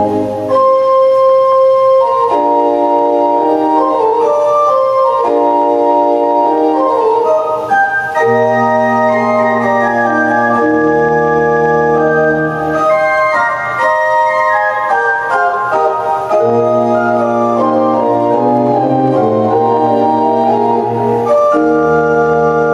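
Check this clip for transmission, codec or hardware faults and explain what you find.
One fault runs through the whole clip: gain pumping. The likely cause is input gain set far too high for the microphone, with a fast limiter or compressor clamping the level down each time a loud sound arrives and then letting it recover. The level swings by around 10 dB as a result. Loud and quiet parts sit unnaturally close together, leaving the sound squashed.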